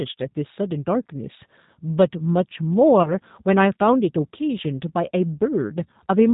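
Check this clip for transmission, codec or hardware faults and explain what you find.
Two faults are audible: a low-bitrate speech codec across the whole clip, and one concealed packet loss just after 3 seconds.

The G.729 codec is present from start to finish, and its damage is plainly audible. The speech is rebuilt from a vocal tract filter, a pitch predictor and a few pulses per subframe, not carried as a waveform. The top of the band stops at 4 kHz, which leaves the speech dull and slightly rough, with a synthetic edge. The coarse character fits an 8 kbit/s G.729A coder.

VoIP packet loss concealed by the speech codec occurs from 3.03 to 3.10 s. About 20 ms of audio went missing, which fits a single lost packet. The decoder filled the gap by extending its last pitch and filter settings at falling gain, so the sound smears briefly into a buzzy tone or coloured noise that fades. Each frame depends on the one before, so the speech stays weakened or distorted until about 3.10 s, well past the missing 20 ms.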